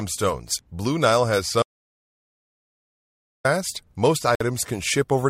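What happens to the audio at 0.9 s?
Nothing goes wrong at 0.9 s; the speech passes through intact at that moment, with no dropout, click or other fault to be heard.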